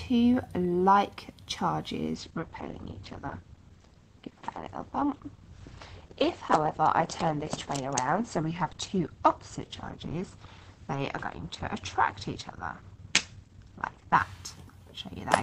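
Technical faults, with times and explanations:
2.15 to 14.15 s, adaptive stream at a lower bitrate: at 2.15 s the quality drops abruptly with no gap or dropout, and it stays degraded for twelve seconds before recovering just as suddenly at 14.15 s. During that stretch the codec artefacts thicken. The player evidently switched to a leaner encoding when the connection slowed, and the sound fits a step from an Opus stream near 64 kbit/s down to one near 16 kbit/s.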